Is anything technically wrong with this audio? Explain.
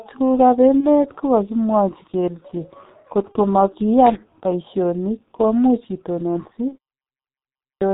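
Yes, there are several faults in this speech clip.

The G.723.1 codec affects the whole clip, running at about 6.3 kbit/s and damaging the sound heavily. It codes speech in 30 ms frames with a slowly updated model of the vocal tract and discards everything above 4 kHz. Fricatives and plosives lose their edges, and the voice comes through dull, muffled and hoarse, with consonants smeared into one another.

VoIP packet loss concealed by the speech codec occurs at 0.80–0.88 s, 3.32–3.40 s and 6.69–6.77 s. Each event is consistent with a single lost 30 ms frame. With nothing to decode, the decoder repeats its last pitch and filter settings at falling gain. Each gap becomes a short buzzy or tonal smear in place of real speech, and the voice stays weak or distorted for a few tens of milliseconds afterwards while the decoder recovers.

Loose connector crackle runs from 4.06 to 4.17 s. A poor contact somewhere in the chain is briefly making and breaking, so the signal is chopped on and off. 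It comes across as a short, irregular burst of scratchy crackle laid over the audio for about a tenth of a second.

A clipped start after a pause runs from 7.20 to 7.82 s, following a 0.5 s pause. The output device appears to drop into a low-power or unlocked state during the silence and needs time to come back. Roughly 0.6 s of the returning speech is swallowed, so the speech resumes abruptly, already mid-utterance, without its opening sounds.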